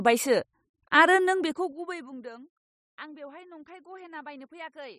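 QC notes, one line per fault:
1.23 to 2.29 s, zipper noise: the level drops by about 25 dB here, but in unsmoothed jumps at around a hundred a second rather than a clean ramp, so each jump leaves a tiny click and you get a fast ticking buzz riding on the speech.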